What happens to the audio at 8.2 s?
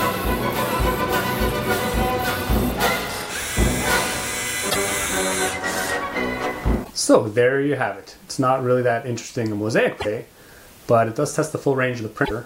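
Nothing goes wrong at 8.2 s; the audio plays through that moment intact, with no dropout, click, glitch or other fault.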